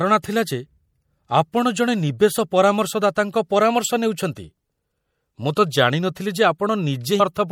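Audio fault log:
Throughout: MP3 compression, plainly audible across the speech, likely from a low bitrate around 64 kbps. The treble is cut at a fixed ceiling and weak detail flickers in and out, giving a watery, swirly tone and smeared consonants; a spectrogram shows a hard upper edge and patchy, blocky gaps.
7.17 to 7.21 s: damaged data in a compressed stream. The decoder misreads corrupted frames and resyncs, producing a brief glitch; the waveform shows an abrupt discontinuity, and the spectrogram a short broadband smear.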